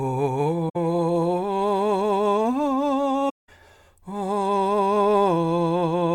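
The music drops into soft-edged holes at 0.69 to 0.76 s and again at 3.29 to 3.49 s. That's AAC frame loss with muting: the decoder zeroed the missing frames, fading out and back in.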